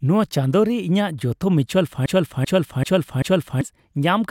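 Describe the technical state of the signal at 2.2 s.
At 2.2 s the speech is caught in a broken-record loop running from 2.06 to 3.61 s: a 388 ms fragment repeats exactly four times back to back, likely from a stalled player or stream resending its last buffer. The waveform and spectrogram show identical blocks tiling end to end.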